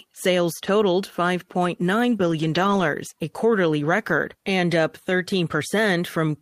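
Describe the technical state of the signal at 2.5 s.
At 2.5 s you're inside a lost packet rebuilt from error correction, running from 2.11 to 2.81 s. The following packets carried low-bitrate copies, so the decoder filled the losses without a gap. About 360 ms of the speech there sounds rougher and noisier.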